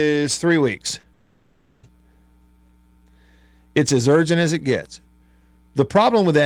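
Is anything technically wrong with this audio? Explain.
Yes, there are two faults. At 0.99 to 1.05 s, just after "three weeks", the speech briefly smears and wobbles: short concealed packet loss, with about 40 ms of missing audio filled by extending the preceding sound. From 1.13 to 1.85 s a synthetic, droning continuation of the last sound replaces the speech for about 0.7 s, with no silence, before the real audio resumes. This is likely a long network dropout, where the receiver kept extending the last sound to cover the lost audio.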